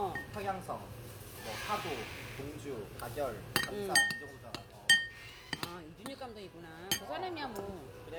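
No technical faults can be heard in this recording of sounds. Nothing in it points to a problem anywhere in the chain.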